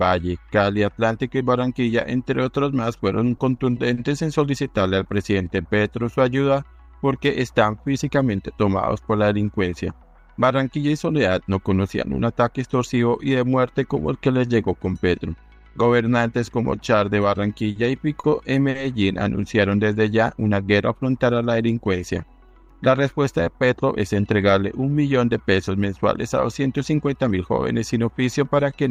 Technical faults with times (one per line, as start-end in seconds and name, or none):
3.37-3.99 repeated stalls (stutter)
17.72-17.78 short stall from a late packet
18.20-18.26 short stall from a late packet
18.70-18.77 short stall from a late packet
27.24-27.46 jitter buffer speed-up